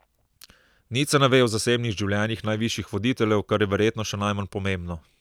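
No technical faults are audible.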